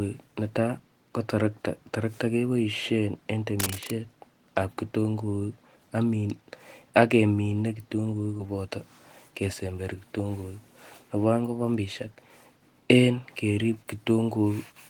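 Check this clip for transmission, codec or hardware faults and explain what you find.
Two faults stand out in this speech clip.

From 3.60 to 3.90 s, right after "keboisien en", a dense, uneven scratching and rustling sits over the speech, nearly as loud as the speech itself. This is cable scratch noise. The likely cause is a worn cable, connector or control being moved: its contact resistance jumps about rapidly, and each jump injects a burst of noise into the signal for as long as the handling lasts.

From 8.37 to 8.41 s, the speech briefly smears and wobbles, as if the last sound were stretched for an instant before the audio blends back in. This is short concealed packet loss. Roughly 20 ms of audio never arrived in time. The receiver filled the gap by extending the preceding sound, then crossfaded back into the real signal, leaving that short glitch.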